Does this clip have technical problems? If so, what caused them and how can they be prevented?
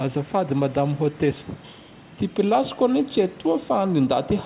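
No, this clip has no technical problems, so there is nothing to prevent.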